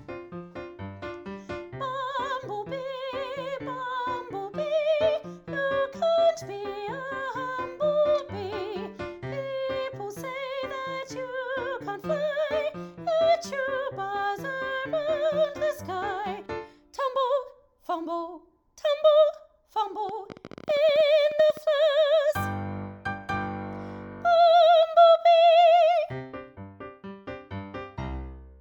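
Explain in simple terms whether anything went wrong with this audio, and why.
Something in the recording chain, most likely electrical interference from nearby equipment or a faulty connection or power supply, kept injecting short pulses. From 20.09 to 21.58 s you hear a train of clicks: about twenty sharp ticks, roughly 13.5 per second at an uneven pace, each about as loud as the sound itself.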